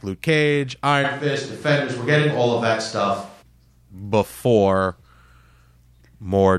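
From 1.06 to 3.41 s, right after "luke cage", the recording likely switches to a distant microphone. The voice abruptly turns roomy and hollow with less bass, room noise sits around 30 dB below the speech, and the close sound returns just as suddenly.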